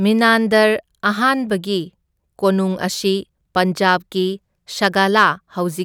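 Speech, with hard clipping from 4.84 to 5.26 s, where the signal overran a gain stage by about 2 dB. Peaks show flattened tops on the waveform, and the spectrogram shows brief high-frequency harmonic smears heard as crackle.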